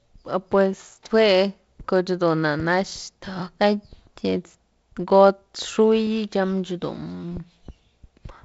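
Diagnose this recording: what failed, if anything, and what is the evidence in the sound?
Nothing stood out on listening to this recording, which carries speech over G.722 wideband telephone coding, with the band topping out around 7.7 kHz and a light grain from the 48 kbit/s mode.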